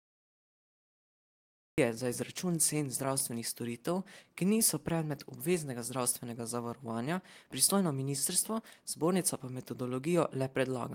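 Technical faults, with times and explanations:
0.00–1.78 s, cut-off start: the audio holds digital silence, then enters abruptly at 1.78 s in the middle of a sound, just before "za izračun cen". The stream began late, so that sound has no natural attack or fade-in and arrives already at full level.
3.79–5.27 s, jitter buffer slow-down: the speech plays at about 95% speed with unchanged pitch, ahead of "obveznega zdravstvenega zavarovanja". The receiver repeated single pitch periods and slices of pauses to rebuild its reserve, adding 82 ms and drawing the sounds out.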